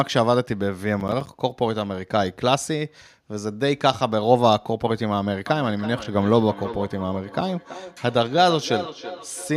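From 1.00 to 1.27 s, processor overload crackle: the processor misses several short buffer deadlines, around 10 ms each, and each gap drops to silence, giving gritty, hard-edged crackling.

From 5.46 s to the end, feedback echo between two devices: a second device replays the sound into the microphone, so repeats return roughly every third of a second, thin and ringing, at their loudest about 12 dB below the speech.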